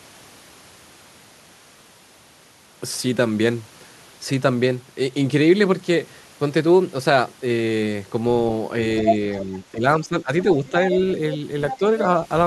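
Other side's voice leaking through at 9.07 to 9.16 s, 9.38 to 9.42 s and 11.71 to 11.77 s: brief scraps of a second voice appear under the talker. The first is about as loud as the talker and the later two are noticeably quieter. This is likely loudspeaker echo that the echo canceller did not fully remove.

Speech suppressed in double talk at 9.46 to 9.84 s, 10.0 to 10.76 s and 11.78 to 11.83 s: the talker's level sags by a few decibels, reaching about 10 dB in the middle stretch. This is likely the canceller turning both sides down when it could not tell them apart.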